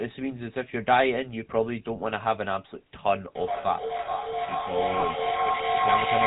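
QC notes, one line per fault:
Throughout: GSM full-rate codec. The whole clip has the buzzy, gravelly roughness of this early phone codec, and the damage is plainly audible. It rebuilds the vocal tract from sparse pulse excitation and drops everything above 4 kHz. That fits a 13 kbps GSM full-rate link.
3.24 to 6.27 s: feedback echo between two devices. A second device in the same room replays this signal, and its microphone sends it back. Each sound returns about every 400 ms, thinner and more ringing each pass. At its peak the echo is about 2 dB louder than the direct speech, so the repeats pile up instead of dying away.
5.00 to 5.03 s: lost GSM frames. The decoder filled a gap of about 20 ms by repeating the last good frame's settings. This is heard as a short rough, metallic ring, which fits one lost frame.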